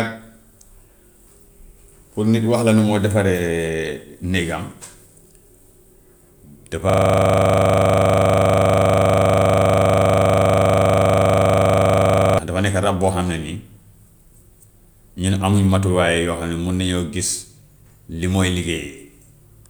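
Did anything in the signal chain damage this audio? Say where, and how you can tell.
Yes. A system hang loop runs from 6.90 s to 12.39 s, at the driver and buffer stage. For about five and a half seconds the speech stops moving forward, and one 40 ms slice of audio repeats exactly, well over a hundred times. The result is a rigid, rattling buzz at 25 Hz. This fits the host or driver freezing while the audio hardware kept replaying the same roughly 40 ms ring buffer until the system recovered.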